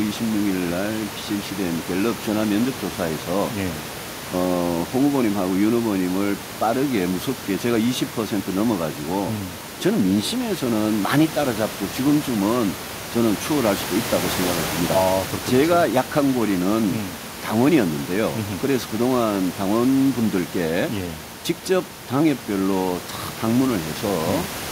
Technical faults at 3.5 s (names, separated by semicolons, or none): none